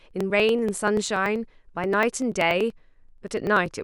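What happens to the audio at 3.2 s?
At 3.2 s the speech is inside a run of periodic USB or driver dropouts lasting from 0.11 to 3.76 s. Every 0.096 s a few milliseconds are skipped. This produces regular ticks while the voice sounds.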